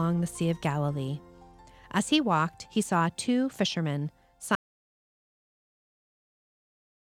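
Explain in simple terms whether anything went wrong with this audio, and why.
An audio dropout to silence begins at 4.55 s and lasts right to the end of the clip. Until then the sound runs normally; then it stops abruptly, mid-flow, and what follows is dead, total silence, without even the faint background hiss of a room. The likely cause is that the input was lost, perhaps through a loose connection, a failed link or an accidental mute, while the recorder kept writing empty samples. Whatever happened after 4.55 s was never captured.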